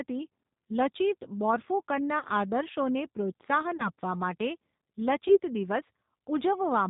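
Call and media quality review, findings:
G.729 codec, whole call: 8 kbit/s low-rate speech coding; nothing above 4 kHz, so speech sounds slightly rough, synthetic and band-limited, damage plainly audible.

VoIP packet loss concealed by the speech codec, at 2.19–2.25 s (40 ms lost), 3.77–3.90 s and 5.28–5.39 s (20 ms each): decoder extrapolates, giving buzzy or noisy fading fill and weak speech afterward.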